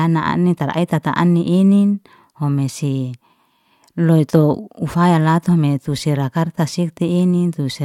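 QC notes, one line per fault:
No technical faults are heard anywhere in the signal.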